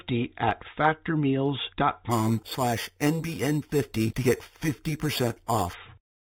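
From 2.11 s to 5.74 s the speech carries imaging from sample-and-hold upsampling. The audio behaves as if it was raised from an 8 kHz rate to 48 kHz by simply repeating each sample, with no smoothing filter to remove the mirrored spectrum. The lowest image fills the 4 kHz to 8 kHz band at about 16 dB below the signal. It is heard as a bright metallic fizz that rises and falls with the speech level.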